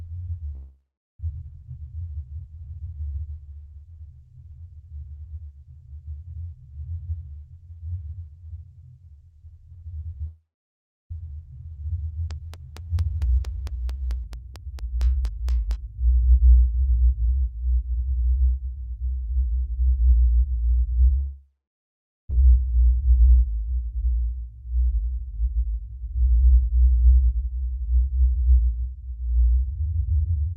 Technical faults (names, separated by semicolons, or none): long network dropout; train of clicks